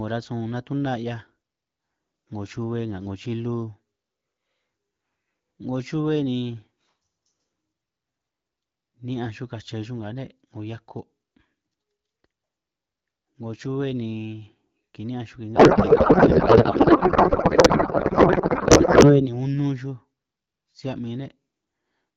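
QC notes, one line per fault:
15.55–19.31 s, codec payload misread: the speech turns into garbled noise and warble that barely tracks it, which fits octet-aligned AMR-WB frames being unpacked as bandwidth-efficient. Unlike packet loss, nothing drops out or repeats. The gibberish runs continuously until clear speech returns.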